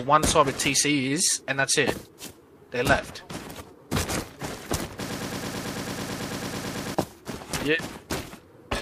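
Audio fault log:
5.10–6.95 s broken-record loop: a 110 ms slice repeats 17 times back to back, likely a stalled stream resending its last fragment, so the real audio there is lost.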